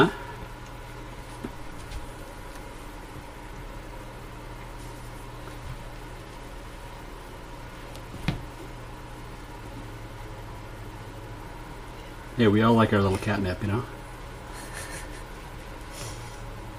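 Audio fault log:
No technical faults can be heard anywhere in the signal.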